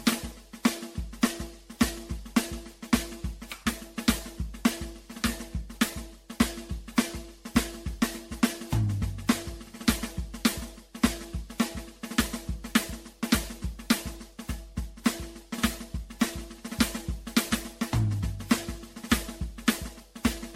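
From start to finish this music has a swirly, hollow, smeared quality, with transients blurred into soft smudges and nothing above about 16.5 kHz. That's generation loss, and it's likely from the audio being decoded and re-encoded around seven times. It sounds like MP3 at something near 63 kbit/s. Each pass quantises on a shifted frame grid, so the noise and spectral holes stack up, leaving it worse than that bitrate alone would.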